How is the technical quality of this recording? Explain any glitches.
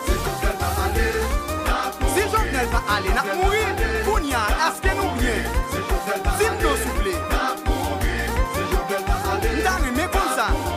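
Nothing in the recording stood out as a technical problem on listening, so there are no glitches to explain.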